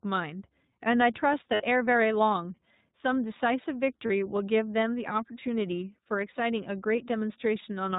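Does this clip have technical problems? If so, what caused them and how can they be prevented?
Yes. Throughout the clip the speech sounds narrowband and slightly rough and synthetic, with nothing above 4 kHz and a plainly audible coded texture. This is the iLBC codec. It codes each frame's excitation independently, and the character here fits its 20 ms frame, 15.2 kbps mode. The result is clear but slightly rough speech stripped of its upper range. Prevention: use a wideband codec such as Opus or G.722 wherever both endpoints and the network support it.

There are also brief held, buzzy vowel-like stretches at 1.54 to 1.62 s, 4.06 to 4.11 s and 6.96 to 6.99 s. The speech snaps back to normal right after each one. These are lost iLBC frames. When packets go missing, the decoder fills the gap by repeating the last pitch cycle blended with noise. The three gaps last about 60, 40 and 20 ms, which fits runs of three, two and one lost 20 ms frames. 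Because each iLBC frame stands alone, recovery is immediate. Prevention: reduce packet loss with QoS prioritisation, a more reliable network path, or forward error correction and redundancy.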